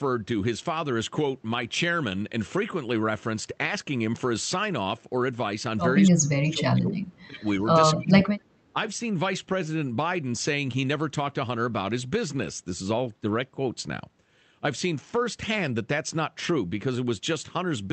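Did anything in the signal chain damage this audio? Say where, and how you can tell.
Yes. In call processing, the speech drops sharply at 6.1–7.01 s (by roughly 35 dB), then at 7.26–7.4 s and 7.95–8.31 s (roughly 20–25 dB). This is likely speech suppressed in double talk: the echo canceller mistook overlapping far-end sound for echo and ducked both.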